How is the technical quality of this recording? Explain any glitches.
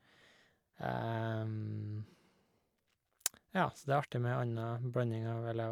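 No technical glitches can be heard in this recording.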